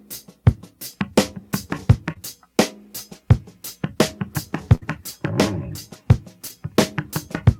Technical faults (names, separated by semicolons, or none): short concealed packet loss; burst of packet loss